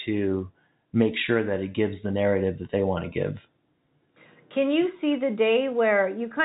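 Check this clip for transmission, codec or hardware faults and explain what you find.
Nothing stood out on listening; the speech carries the narrow telephone-band character of G.711 coding, with nothing above about 3.8 kHz.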